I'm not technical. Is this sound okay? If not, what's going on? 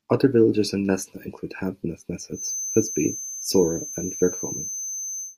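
No. From 2.31 s to the end, a thin, steady feedback whistle at about 6.2 kHz sits under the speech, swelling and fading slowly in level. It's likely a loudspeaker feeding back into the microphone, held just short of howling.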